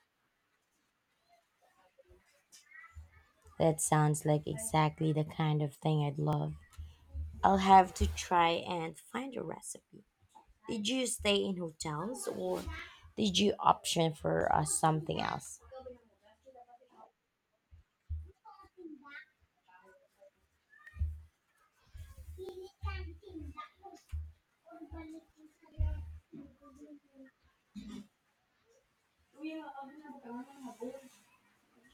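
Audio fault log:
1.49–30.57 s, clock drift buffer slips: a click recurs every 1.62 s, around twenty times, over the speech. Likely two devices on separate clocks about 1000 ppm apart, so the buffer drifts until roughly 70 samples are dropped or repeated at each slip.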